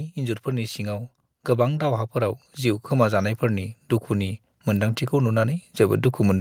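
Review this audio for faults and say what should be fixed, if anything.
From about 0.14 s right through to the end at 6.4 s, there's automatic gain rising: the level keeps creeping up as the AGC decides the input is too quiet and pushes its gain higher bit by bit. The speech and the background noise swell together, so the room gets louder along with the talker rather than the speech alone coming forward. To prevent it, set a sensible fixed input gain and switch off the AGC on the capture path.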